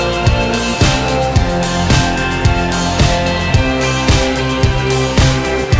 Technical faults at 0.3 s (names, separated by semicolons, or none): none